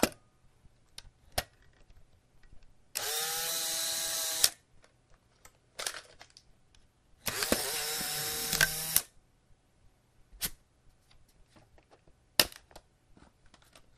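Everyday sound with a dull, granular character from start to finish, the plainly audible damage of MP2 compression, likely at a low rate that fits around 80 kbps. Too few bits leave the upper sub-bands switched off or flickering, so a spectrogram shows a hard ceiling with ragged, blinking blocks of energy near the top, and the remaining bands sound coarse and gurgling. Over that sits DAB burbling at 1.68–1.92 s, 3.78–4.02 s and 12.46–12.53 s. These patches of burbling come from bit errors slipping past error correction into the audio data at a small fraction of a percent. Corrupted samples put short blips of noise in single sub-bands, and corrupted scale factors that get through make sub-bands jump in level for up to a frame, which shows on a spectrogram as isolated bright horizontal bars and in the waveform as short, irregular bursts.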